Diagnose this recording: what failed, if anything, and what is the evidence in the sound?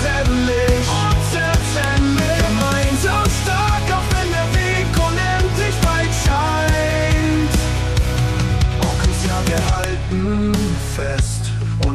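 A file header played as audio, from storage or file joining: sharp, loud snaps at 1.84, 5.84 and 9.84 s, exactly 4.0 s apart. Each piece's header bytes are decoded as samples. Unlike dropout clicks, they keep rigid spacing and ignore the signal.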